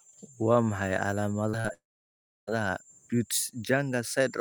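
Short concealed packet losses at 1.49–1.55, 1.61–1.66 and 1.68–1.71 s are patched by extrapolation, heard as brief smears. On a spectrogram they appear as blurred, repeated harmonic slivers. At 1.73 s the sound briefly buzzes or hisses, fades and drops to near-silence until 2.49 s, likely a long network dropout. The waveform shows a decaying tail, then a flat gap.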